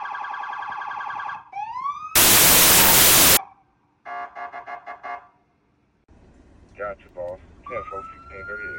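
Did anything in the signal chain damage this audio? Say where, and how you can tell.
Yes. Between 2.16 and 3.37 s the sample-format conversion stage breaks down with a wrong sample width fault. The sound turns into loud noise with the original barely audible underneath, and it plays at about two-thirds speed with pitch lowered to match. That fits packed 24-bit data being read as 16-bit: each read value mixes bytes from neighbouring samples, so only some values carry the true high-order bits, and the frame count inflates by half.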